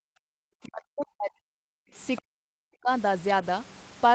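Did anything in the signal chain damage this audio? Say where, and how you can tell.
Yes, all in the call processing stage, specifically the acoustic echo canceller.

Background gated by the echo canceller: from 0.0 to 0.34 s the room sound falls away, by about 40 dB at its deepest, for roughly 300 ms in total, then comes back. The canceller decided the loudspeaker was active and applied heavy suppression to the microphone path. With the background ducked that far, the noise floor collapses and returns abruptly instead of staying continuous.

Speech suppressed in double talk: the talker's own speech is pulled down from 0.62 to 1.75 s, deep and about a second in total, and again from 2.25 to 2.89 s, deep and about half a second. A shallow dip of a few dB occurs from 1.94 to 2.00 s. The pattern points to the canceller's nonlinear suppression likely treating near-end speech as echo while the far end was talking, so it attenuated both together.

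Other side's voice leaking through: from 2.16 to 2.22 s a brief scrap of a second voice sits roughly 20 dB below the talker's level. This is residual echo, likely the far-end signal from the loudspeaker that the canceller's adaptive filter failed to subtract from the microphone before suppression caught up. It appears just ahead of the second long suppression.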